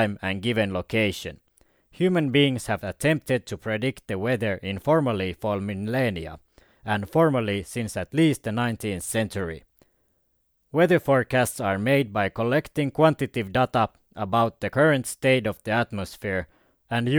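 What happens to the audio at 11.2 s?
Nothing goes wrong at 11.2 s; the speech continues intact through that moment, with no dropout, click, distortion or other fault.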